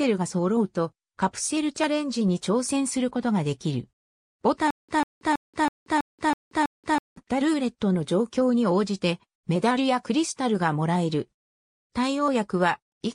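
From 4.71 s to 7.17 s the audio falls into a stutter with silent gaps. A 145 ms fragment repeats seven times, each followed by about 180 ms of dead silence, so the same burst returns every 325 ms or so. The likely cause is a stalled player or stream replaying its last buffered fragment on each retry before running dry. A waveform shows identical blocks separated by flat silent stretches, and a spectrogram shows matching slices with empty gaps. The audio that belonged in that span is missing.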